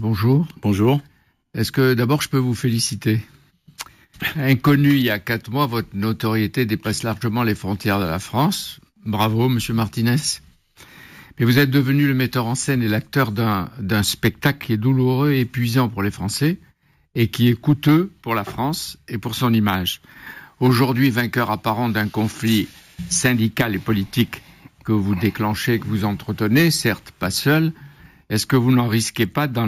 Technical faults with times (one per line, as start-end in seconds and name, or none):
0.00-29.68 imaging from sample-and-hold upsampling